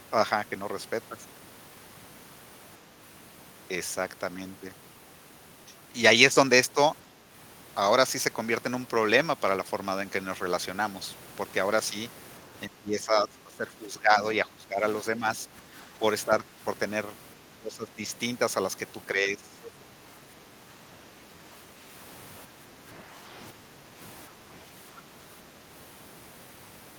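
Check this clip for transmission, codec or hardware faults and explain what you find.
Two kinds of echo-canceller fault appear in the speech.

Speech suppressed in double talk occurs from 12.49 to 16.59 s, 17.56 to 18.05 s, 19.14 to 19.59 s and 22.45 to 24.48 s. The talker's level dips by up to about 15 to 20 dB, and only mildly in the last stretch. The likely cause is the canceller failing to separate the talker from simultaneous loudspeaker echo and attenuating everything.

The other side's voice leaks through briefly from 19.64 to 19.71 s, a faint scrap roughly 20 dB below the talker. It likely comes from loudspeaker playback that the canceller failed to subtract fully from the microphone signal, right after a suppression event.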